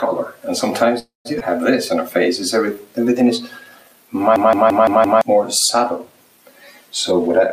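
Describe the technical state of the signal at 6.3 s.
At 6.3 s the signal is intact, with no dropout, distortion, clipping or other fault to be heard at that point.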